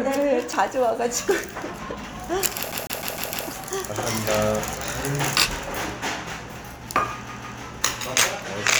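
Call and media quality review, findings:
CD stuck on one turn, 2.72 to 3.48 s. Same 152 ms slice of sound plays five times, brief mute at each jump. Fast, even stutter. Probable component: disc playback source. Scratch knocks the laser back one track each revolution.

CD stuck on one turn again, 7.29 to 7.60 s. Same 152 ms loop, two repeats, same mute at the seams. Identical loop length points to the same scratch on the disc.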